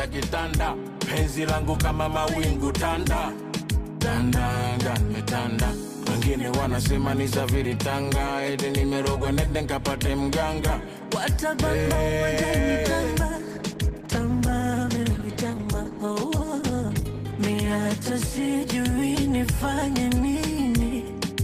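From 13.36 to 20.67 s, a call bitrate drop makes the sound coarse and muffled, consistent with about 12 kbps. Unlike packet loss, nothing cuts out.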